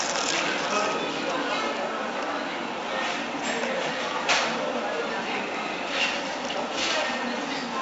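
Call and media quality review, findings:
4-bit ADPCM compression, throughout, 0 s to end. Gritty hiss riding on every loud passage, rising and falling with level, heavy codec damage. Harsh distortion on sharp attacks where the adaptive step lags the signal. Probable component: ADPCM encoder. Band empty above 7.7 kHz, dull top end, which fits a 64 kbps stream at a 16 kHz sample rate.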